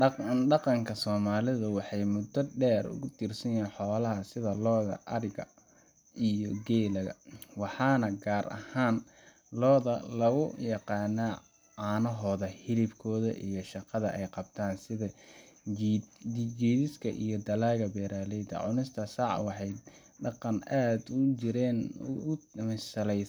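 No dropouts, clicks, distortion or timing faults turn up anywhere in the speech; nothing to flag.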